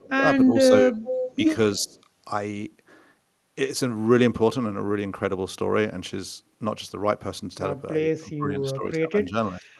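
Right from the start, the voice keeps ducking: at 0.0 to 0.25 s it drops by about 15 dB, then sags again, a bit less deeply, between 0.46 and 0.96 s. That's likely speech suppressed in double talk. With both ends talking at once, the echo canceller couldn't tell this talker from its own loudspeaker echo, so it pulled everything down. Then from 1.03 to 1.35 s there's a delayed copy of the voice trailing about a third of a second (333 ms) behind, sitting only about 10 dB under the speech. That's likely an echo leak, where a loudspeaker end's canceller didn't fully clear what its mic heard and sent it back. At 1.79 to 1.98 s the voice gets gouged hard, about 25 dB down, which again points to double-talk suppression, and a barely-there scrap of that same 333 ms echo, around 40 dB down, slips in from 1.89 to 2.0 s, likely the same leak. The long one comes near the end: from 8.21 to 9.34 s the level keeps dipping in pieces by about 15 dB, and a final short cut of about 25 dB lands at 9.53 to 9.7 s. 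Both are likely the canceller clamping down during overlapping talk again. All of this rides on an Opus call path at 32 kbps, with the top end stopping at 12 kHz.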